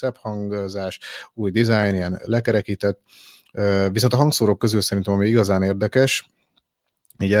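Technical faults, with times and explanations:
1.02 s, microphone volume stepped up: the speech and the background noise behind it both jump louder together by about 5 dB in a single instant, with no fade, and stay at the new level. Because the whole input rises at once rather than the voice alone, the change points to the call software judging the microphone too quiet and raising the device's input volume in one step, not to anything happening at the source.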